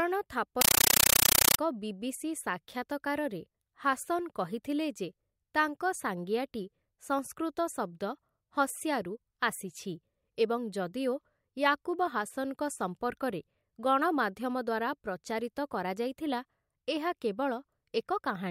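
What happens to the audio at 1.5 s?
At 1.5 s the speech is replaced by a compressed stream played as audio, from 0.61 to 1.59 s. An AC-3 data stream, one that fits 448 kbps, is treated as plain samples, so each 9.33 ms noise burst and its silent padding repeat 31.25 times a second. The result is very loud static with a steady chattering rhythm, which sets it apart from random digital noise or clipping.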